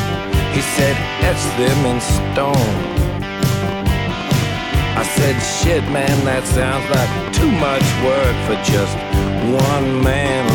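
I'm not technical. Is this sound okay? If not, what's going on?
No. From about 2.18 s until nearly the end, at 10.48 s, there is a train of clicks. These are sharp ticks or pops laid over the sound, around 50 of them. They come about six times a second, but not evenly. They stand out above the sound itself, and they carry on through quiet moments too. The likely cause is electrical interference from nearby equipment, or a faulty connection or power supply.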